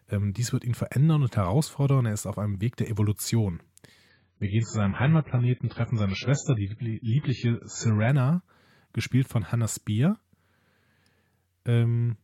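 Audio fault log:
4.09 to 8.09 s, adaptive stream at a lower bitrate: the treble abruptly disappears above about 7.6 kHz and the speech turns dull, with codec artefacts building, then clarity snaps back with no gap. The stream switched to a much lower-bitrate rendition, which fits a drop from roughly 96 to 12 kbit/s AAC.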